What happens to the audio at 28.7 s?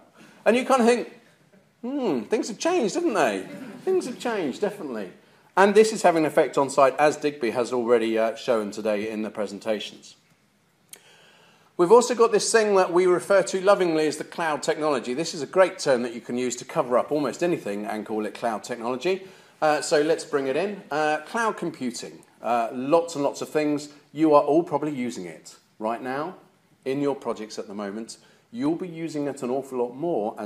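Dropped samples at 28.66 s, heard as one sharp click. A tiny run of samples, well under a millisecond's worth, is missing from the stream, so the waveform leaps straight from one value to a later one instead of moving smoothly between them. That abrupt step is the click, and it shows as a thin vertical line across the spectrum. The gap is far too brief to take any sound away; it most likely comes from a momentary buffering or transfer glitch.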